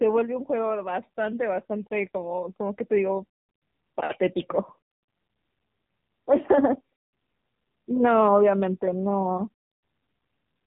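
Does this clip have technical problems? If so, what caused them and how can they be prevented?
Yes. AMR narrowband mobile codec damage runs throughout: nothing above 3.8 kHz survives, and the speech sounds plainly buzzy and synthetic, which fits a low mode near 7.4 kbps. Unlike a simple low-pass filter, the vocal-tract model rebuilds the voice from sparse pulses. Preventing it means recording locally or using a wideband link instead of a mobile call.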